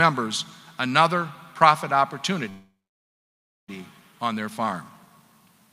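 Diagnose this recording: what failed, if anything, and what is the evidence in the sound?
At 2.49 s the sound stops abruptly and is replaced by a short decaying buzz or hiss that fades into silence for nearly a second before the audio resumes at 3.70 s, picking up exactly where it left off with nothing skipped. This is a call audio freeze at the network stage: packets were likely held up in transit, the jitter buffer ran dry, and the receiver extended the last sound until delivery resumed, inserting a gap of about 1.19 s.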